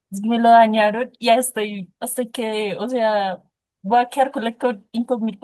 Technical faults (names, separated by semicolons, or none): lost packet rebuilt from error correction